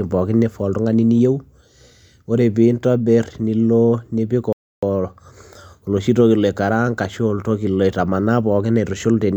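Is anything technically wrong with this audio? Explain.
Yes. From 4.53 to 4.83 s the speech drops to silence, then resumes exactly where it stopped: a rebuffering stall, where playback starved for data and added 0.3 s.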